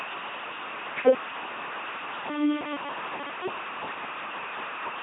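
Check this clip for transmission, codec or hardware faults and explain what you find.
The speech carries one fault, present for the whole clip: an LPC-10 vocoder. Every stretch of speech sounds buzzy, flat and robotic, with harsh buzz or hiss wherever voicing is misjudged, and nothing above 3.8 kHz. The speech is reduced to a short all-pole vocal tract filter excited by either a pulse train or noise, each frame forced to be fully voiced or fully unvoiced. The damage is heavy, which fits a 2.4 kbit/s rate.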